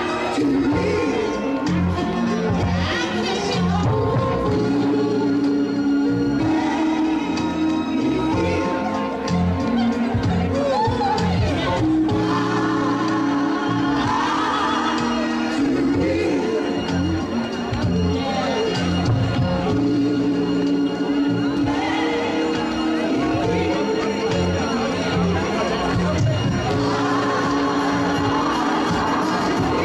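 No technical faults can be heard anywhere in the audio, and the signal stays steady and intact throughout.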